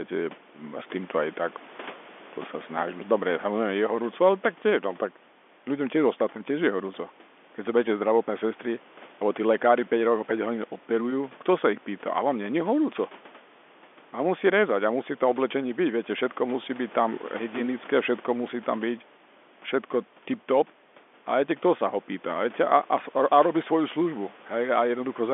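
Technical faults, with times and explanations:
No faults found: the speech sits in a telephone band of about 250 Hz to 3.5 kHz, with nothing above 3.8 kHz, as G.711 telephone coding gives, and the room noise stays about 28 dB below it.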